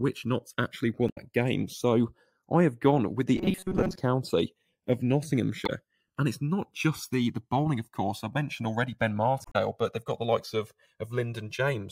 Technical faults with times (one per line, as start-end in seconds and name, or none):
0.00-11.92 channels drifting apart
1.06-1.18 damaged data in a compressed stream
3.37-3.97 robotic sound from repeated short buffers
5.65-5.70 damaged data in a compressed stream
9.42-9.56 damaged data in a compressed stream